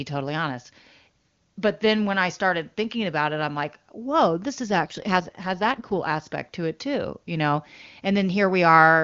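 An AMR rate drop runs from 4.67 to 6.28 s. The codec is pushed to a lower rate, with bits diverted to error protection, so the speech turns rough and synthetic without any gap or narrowing of the band. The sound fits a fall from the 23.85 kbit/s AMR-WB mode to about 8.85 kbit/s.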